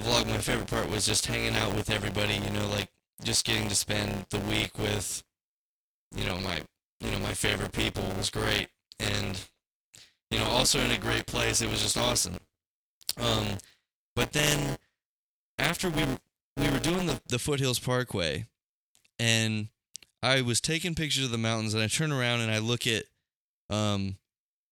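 Speech with buffer tearing from 0.00 to 17.30 s: a steady robotic buzz near 172 Hz, which fits a 256-sample buffer. Writer and reader cross within each period, so about a fifth of every buffer replays audio roughly 10 ms old between hard joins.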